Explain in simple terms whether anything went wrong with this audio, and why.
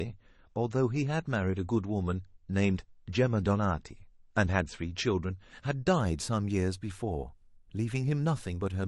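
An adaptive stream starting at a low bitrate affects the first 6.0 seconds. The player began with a cheap, low-quality version of the speech to start quickly, so it sounds dull and smeared, with nothing above 8.3 kHz. At 6.0 seconds it switches to a better version and clears up instantly, without any gap.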